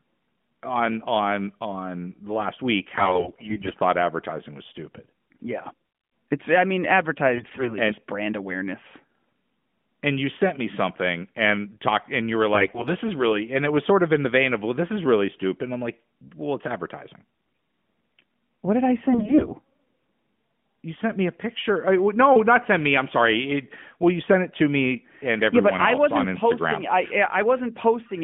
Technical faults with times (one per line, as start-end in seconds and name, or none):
2.96-3.75 AMR bit errors
7.34-7.77 AMR bit errors
12.54-12.90 AMR bit errors
17.34-17.60 AMR bit errors
19.12-19.55 AMR bit errors